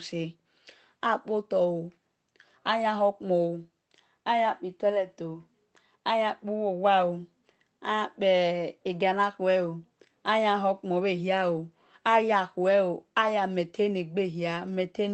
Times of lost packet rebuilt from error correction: 0.69-0.71

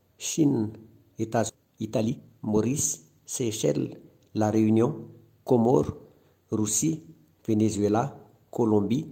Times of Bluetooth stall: none

